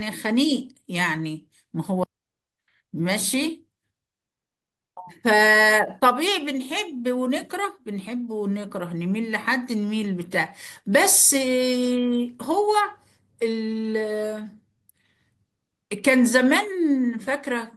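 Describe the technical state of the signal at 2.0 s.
Right around 2.03 to 2.05 s there's a skip ahead. Something like a second of the speech just never plays. That stretch got dropped, either in transit or when the jitter buffer overflowed, while later audio was already queued up. Nothing fills the hole, so playback lurches straight to the later material and the two sides butt together almost seamlessly. You hear it as an abrupt jump in the flow, and the delay shrinks by roughly a second.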